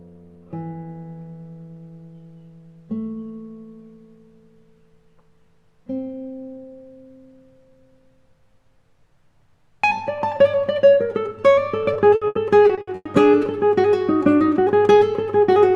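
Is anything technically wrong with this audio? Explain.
Yes. Between 11.93 and 13.07 s there is repeated packet loss (robotic sound). Seven separate gaps occur in that stretch, the longest 100 ms, together totalling 360 ms, or about a third of the span. Each gap is filled by extending the last received sound, and the next gap follows before the signal recovers, so this passage sounds choppy, with pieces missing and patched over by stretched-out audio.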